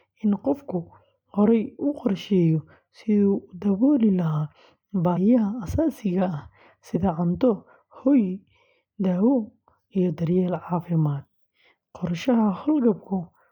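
At 5.16 s and again from 6.95 to 6.97 s, the speech lurches forward with a short, smeared blip. These are compressed frames skipped: about two 23.2 ms frames go unplayed each time, dropping roughly 50 ms. Overlapping neighbour frames soften each join.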